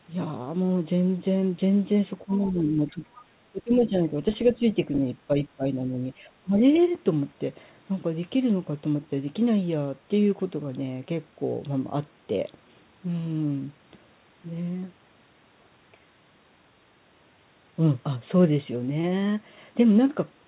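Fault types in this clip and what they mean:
Speech suppressed in double talk: The talker's level drops by up to about 15 dB in patches between 2.25 and 6.57 s, likely because the echo canceller turned everything down while both sides spoke. The sound dips and recovers rather than going fully silent.
Other side's voice leaking through: Short scraps of a second, much fainter voice, about 20 to 25 dB below the talker, appear near 2.3, 3.8, 4.5 and 6.6 s, likely loudspeaker echo the canceller missed. Here sound is added rather than removed.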